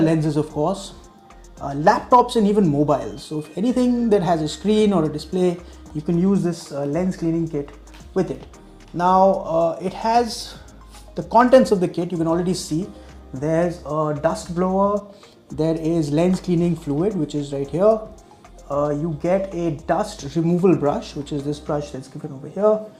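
No technical faults can be heard anywhere in the recording. Nothing breaks up, drops out or distorts at any point.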